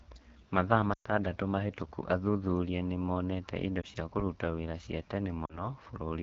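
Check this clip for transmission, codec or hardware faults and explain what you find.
Two faults are present: low-rate wideband codec damage across the whole speech clip, and three bursts of lost speech frames.

AMR wideband (HD Voice) codec, throughout: the speech sounds plainly rough and raspy, which fits one of the lowest rates, such as 8.85 kbit/s, where the pulse excitation is too coarsely coded.

Lost AMR speech frames, at 0.93–1.08 s, 3.82–3.86 s and 5.45–5.69 s: the decoder repeats the last good settings with falling gain, so the sound dips quickly toward silence, then returns weak.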